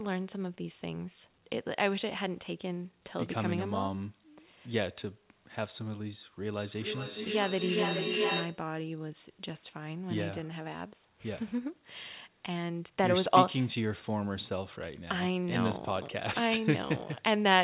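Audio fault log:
6.54–8.72 s feedback echo between two devices: a second device replays the sound into the microphone, so it recurs roughly every 0.4 s at about 0 dB, building instead of fading. A spectrogram shows evenly spaced stacked copies.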